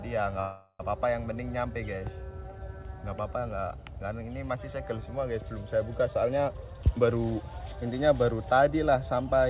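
From 0.40 to 0.81 s the sound stalls in a call audio freeze. The last fragment is drawn out into a fading buzz or hiss for about 0.39 s, with the final 50 ms dropping to silence. Then the audio resumes exactly where it stopped, so nothing is lost and everything after it lands about 0.39 s late. The likely cause is packets held up in transit until the jitter buffer ran dry.

From 6.53 to 7.82 s a jitter buffer speed-up takes over. The buffer is holding more than its target, so the receiver trims short pitch-period-length slices again and again, removing roughly 0.4 s in total. Playback runs at about 130% of normal speed with the pitch unchanged, which gives a hurried, clipped pace. Throughout, the band stops at 4 kHz, which fits a G.711 A-law call path at 64 kbps, with its usual coding noise.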